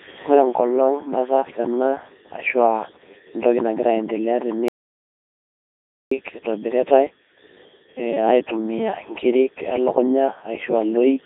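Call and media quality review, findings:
Codec 2 vocoder, throughout: robotic, buzzy speech, heavy damage. Voice rebuilt from sine waves using only pitch, voicing, energy and spectral envelope, so the waveform is lost. 3.2 kbit/s mode, line band 300 Hz to 3.7 kHz.

Audio dropout to silence, 4.68 to 6.11 s: speech cuts out mid-flow, about 1.43 s of silence with no room tone. Likely input loss (device disconnect, link failure or mute) while the recorder kept writing silence. Content in the gap unrecoverable.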